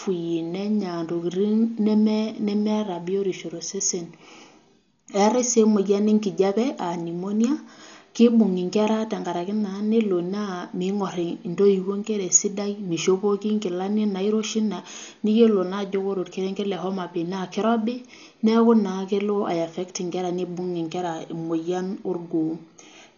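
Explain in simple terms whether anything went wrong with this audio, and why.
Yes. From start to finish the speech sounds dull, with nothing above about 7 kHz, and a rough, fluttering hiss clings to the voice. That grainy noise, rather than a clean muffling, is likely the mark of heavy Dolby Digital compression.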